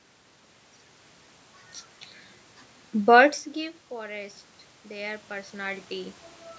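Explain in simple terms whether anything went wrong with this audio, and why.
Two things went wrong, both from the automatic volume control. From 3.01 to 4.05 s there's automatic gain falling: the system decided the speech was too loud and gradually turned it down, background and all. Right after, from 4.07 to 5.93 s, automatic gain rising kicks in. The input had dropped a lot, so the control slowly pushed the level back up, making speech and room noise swell together. The talker shifting position around 3 s and again near 6 s is just natural movement, not a fault.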